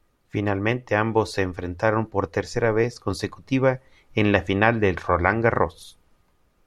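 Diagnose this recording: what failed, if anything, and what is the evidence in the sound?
Nothing in the signal chain appears to have failed: the speech signal runs continuously, with no dropouts, clicks, distortion or level disturbances at any point.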